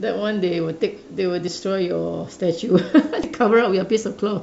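At 1.47 s, compressed frames are skipped. About one frame is lost, and the sound jumps ahead roughly 20 ms. From 3.23 to 3.26 s, about two frames go, roughly 40 ms. The jump sizes fit 20 ms frames.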